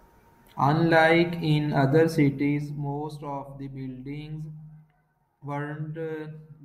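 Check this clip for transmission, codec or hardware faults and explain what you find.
One fault stands out: zipper noise between 2.2 and 3.16 s. During that stretch the speech level falls by around 15 dB. The drop is not smooth. It moves in coarse steps at roughly 30 per second, with no smoothing between them. Each step is an abrupt jump in gain, and each jump leaves a tiny click in the waveform. Together they form a fast ticking or zipping that rides on the speech while the level moves.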